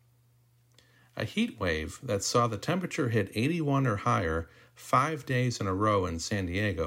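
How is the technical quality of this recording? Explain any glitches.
No glitches or faults are audible.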